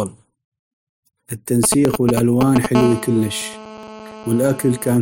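From 1.64 to 2.66 s there are GSM signalling bursts: a nearby 2G phone pinging the network, rectified into a galloping tick-and-buzz pattern at 217 Hz, roughly as loud as the speech. At 1.85 s the audio skips a brief slice, around 20 ms, joined without a gap. From 2.75 to 4.97 s the phone is in a call, giving steady GSM phone buzz, a raspy 217 Hz drone about 13 dB under the speech. At 3.83 s there's another skip, about two seconds after the first, which points to audio missing between chunks, likely from 2-second processing blocks.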